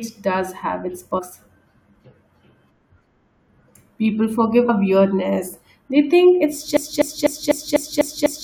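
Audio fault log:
1.17–1.20 s and 4.68 s, damaged data in a compressed stream: Corrupted bytes reached the decoder, which misread those frames, lost sync and skipped ahead to the next valid frame header. Each time this produces a brief glitch in the speech. The first comes right after "does have its", and the second, a single glitch under 20 ms, falls just before "weirdness they think it's".
6.77 s to end, broken-record loop: The stream or player likely stalled and kept resending the last fragment it held. Right after "weirdness they think it's", a piece of about 0.25 s repeats exactly, back to back, seven times until the clip stops. The speech that should have filled those final 1.7 s is lost and replaced by the same stuttering fragment.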